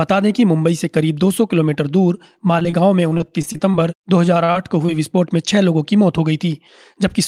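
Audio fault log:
2.63–2.66 s and 2.70–2.74 s, short concealed packet loss: Twice in quick succession, about 20 ms of audio failed to reach the decoder in time. Each time the receiver patched the hole by extending the preceding sound for roughly 17 to 18 ms, carrying its pitch or its noise texture forward, then cross-faded back into the real signal. What you hear is two tiny smears.
2.81–3.58 s, jitter buffer slow-down: The jitter buffer was running low or had just raised its target delay, and stretched the audio to build up a reserve. It repeated single pitch periods and slivers of pauses, adding about 39 ms over this stretch. Playback drops to 96% speed with the pitch unchanged, so sounds are drawn out slightly.
3.09–3.75 s and 4.26–4.90 s, repeated packet loss (robotic sound): Packets kept arriving late or not at all, so the receiver had to patch one gap after another. In the first run the gaps are each no longer than about 23 ms, and concealment covers about 17% of the span. 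The second run has fewer gaps, the longest about 36 ms, concealing about 13%. Because each gap is filled by continuing the last sound, the result is choppy audio with pieces missing, and the first run overlaps the tail of the slow-down.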